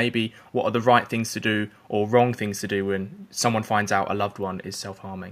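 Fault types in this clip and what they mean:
No technical faults can be heard anywhere in this speech recording. There is nothing here that calls for an entry under any fault type.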